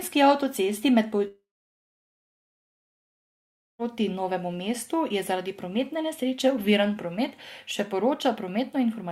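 Speech with a long network dropout from 1.27 to 3.82 s, just after "avtocesti med." The last sound smears into a brief fading buzz, then about 2.4 s of silence follow, likely from lost packets. Unlike a natural pause, speech resumes skipped forward, with about 2.5 s missing.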